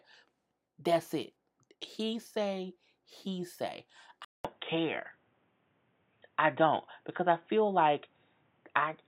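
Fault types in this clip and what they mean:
Input switched to a poorer device: at 4.25 s the recording likely moved to a different, lower-grade input, such as another microphone or a headset's call profile. About 200 ms of silence marks the switch. From there to the end, nothing above 3.8 kHz comes through, so the sound turns dull and boxy. The level shifts by roughly 5 dB, and a faint new background noise appears, around 45 dB below the signal.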